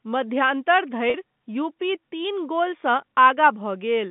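Telephone-band speech, carried over G.711 A-law with the band limited to 150 Hz to 3.6 kHz, has one packet loss with pitch repetition from 1.10 to 1.14 s. About 40 ms of audio went missing, which fits two 20 ms packets. The receiver bridged the gap by repeating the last pitch period, so the sound briefly holds on a slightly buzzy, sustained tone before normal speech resumes.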